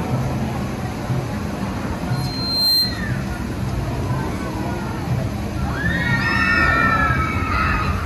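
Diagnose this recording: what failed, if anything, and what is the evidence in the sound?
The analogue path picked up its own loudspeaker, producing loudspeaker feedback squeal: a 4.2 kHz tone swells over about half a second from 2.12 s, peaks about 5 dB above the signal, and stops at 3.09 s.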